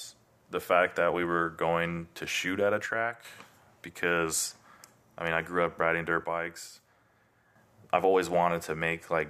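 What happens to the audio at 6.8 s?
At 6.8 s the level sags abruptly by about 6 dB, from 6.24 to 7.56 s, just after "grew up riding dirt" and recovering before "I've always". This is likely one channel dropping out: the mono sum loses half its shared signal.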